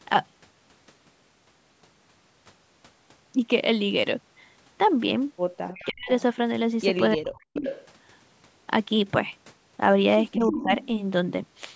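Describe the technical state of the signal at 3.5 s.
At 3.5 s the speech signal is intact, with no dropout, distortion or other fault, only the ordinary band-limiting of call microphone processing.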